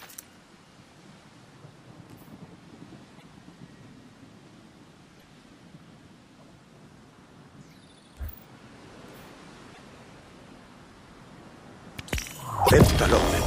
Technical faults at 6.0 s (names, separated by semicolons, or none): none